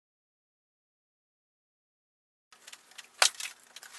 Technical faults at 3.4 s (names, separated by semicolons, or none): processor overload crackle